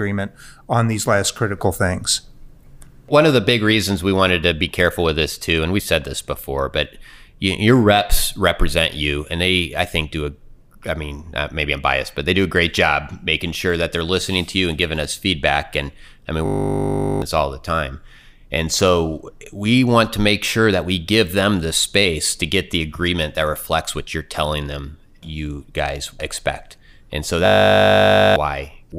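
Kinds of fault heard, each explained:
system hang loop: a steady 50 Hz buzz interrupts the speech twice, one 20 ms slice repeating while the frozen system left the hardware cycling its buffer.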